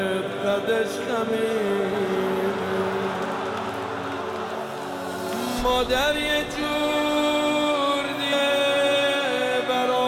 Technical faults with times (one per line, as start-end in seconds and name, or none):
8.31 damaged data in a compressed stream